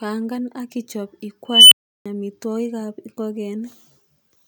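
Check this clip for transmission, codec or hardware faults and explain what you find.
One fault is present: an unstable filter. At 1.49 s, after "ak ichop", a squeal around 3 kHz swells over 0.23 s and clips. A recursive filter with bad coefficients has run away and overflowed. Silence follows for 0.34 s. Speech returns at 2.06 s with "amitwogik ab".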